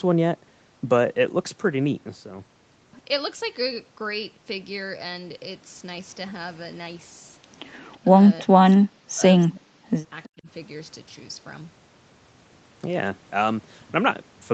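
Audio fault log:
7.93–7.97 s, echo leak: a faint copy of the far side returns 321 ms late, roughly 40 dB down; likely residual echo. Spectrogram shows a weak, smeared ghost band.
8.07–8.13 s, speech suppressed in double talk: the voice dips only slightly, about 5 dB, likely from echo-canceller suppression during overlap; the waveform shows a brief shallow notch.
8.43–9.22 s, speech suppressed in double talk: the voice nearly vanishes for about 0.7 s, roughly 40 dB down, likely from suppression during overlap; the waveform collapses and the spectrogram goes dark.
9.48–9.83 s, speech suppressed in double talk: about 0.3 s cut deep, roughly 40 dB, likely double-talk suppression; the spectrogram shows a clean gap across all bands.
10.23–10.29 s, echo leak: a short delayed scrap, 321 ms behind, around 30 dB under the speech, likely residual echo; it appears as a thin, blurred trace on the spectrogram.
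10.28–10.48 s, speech suppressed in double talk: 0.2 s pulled down about 40 dB, likely double-talk suppression; the waveform flattens abruptly, then recovers.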